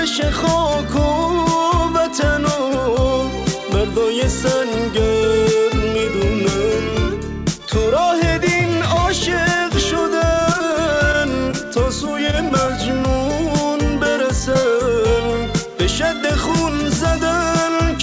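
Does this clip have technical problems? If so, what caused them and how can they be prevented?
Yes. Repeated packet loss (robotic sound) occurs at 10.40–10.76 s and 12.27–12.70 s. Each stretch has four gaps patched by extending the last sound, leaving about 15% concealed and a choppy texture with pieces missing. Preventing it means a more stable network path, with forward error correction or redundancy so lost packets can be rebuilt rather than guessed.

Short concealed packet loss appears at 11.51–11.55 s, 14.54–14.57 s and 14.61–14.72 s. In each, about 20 ms of audio never arrived and was filled in, giving a brief smear or wobble. A larger jitter buffer plus reduced congestion on the link would let these late packets arrive in time.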